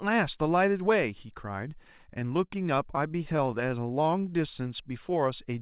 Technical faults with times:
1.98-3.69 scattered short gaps
3.80-5.14 jitter buffer slow-down

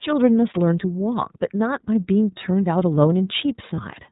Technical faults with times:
0.00-4.11 iLBC codec
3.75-3.81 lost iLBC frames

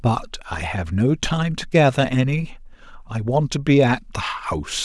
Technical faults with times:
none

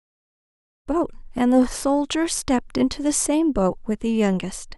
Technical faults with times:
none

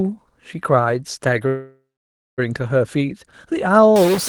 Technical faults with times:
1.47-2.40 call audio freeze
3.96-4.29 stuck bit

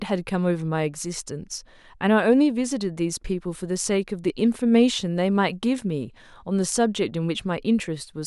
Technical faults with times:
none

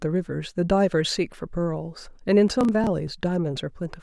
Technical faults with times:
2.48-3.07 processor overload crackle

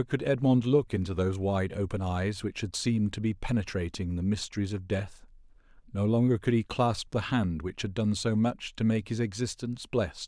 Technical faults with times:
none

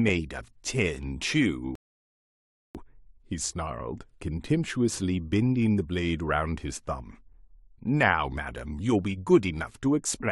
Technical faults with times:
1.75-2.75 rebuffering stall

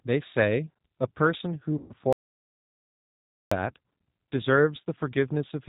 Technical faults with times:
0.00-5.68 G.729 codec
1.78-1.93 VoIP packet loss concealed by the speech codec
2.13-3.51 audio dropout to silence

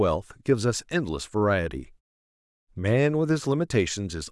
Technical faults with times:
none

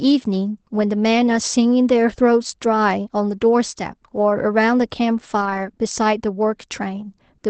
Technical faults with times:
4.29-4.31 lost packet rebuilt from error correction
5.41-5.59 lost packet rebuilt from error correction

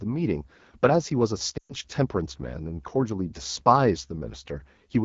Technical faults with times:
0.00-5.04 AMR wideband (HD Voice) codec
1.57-1.75 lost AMR speech frames

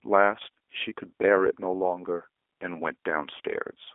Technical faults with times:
0.00-3.95 G.729 codec

